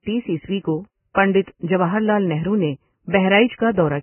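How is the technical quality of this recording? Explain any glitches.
Quality is poor. The speech sounds dull and grainy throughout, with nothing above 3 kHz. This is likely heavy Vorbis compression at a very low bitrate, around 10 kbps, which turns treble into hiss.

Pre-echo occurs at 1.14 s, after "عیسوی کو", and at 1.42 s, before "جواہر لعل نہرو نے". Block noise spreads backward, adding 34 ms and 52 ms of hiss before attacks.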